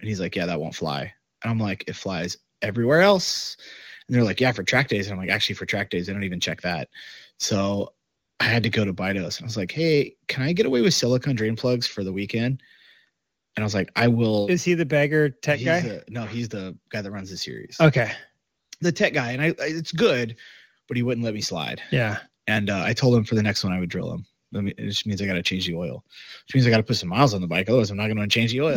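Sample clock jitter runs through the whole clip. The converter's clock wobbles by a few microseconds, so each sample is taken slightly off time. The resulting error follows the slope of the waveform and sits about 30 dB below the speech. It sounds like a hiss or grit that swells on loud and sibilant sounds and disappears in the gaps. Steady background noise would stay put through pauses; this hiss does not.

AMR comfort noise cuts in seven times. Each time, the phone treated the talker as silent, stopped sending speech frames, and the receiver filled the gap with synthetic noise built from a rough level-and-spectrum sketch. The instances are at 1.33–1.41 s after "yeah that won't fly", at 2.60 s between "I'm like it flies" and "everywhere else", at 8.07–8.37 s just before "I had to go", at 13.25–13.53 s, 18.47–18.71 s, 22.44 s and 24.49 s. The real background drops out and a smooth, uniform hush switches in. 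Unlike jitter, this noise doesn't track the signal at all.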